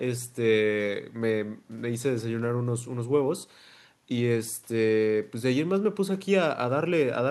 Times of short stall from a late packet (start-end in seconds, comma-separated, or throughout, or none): none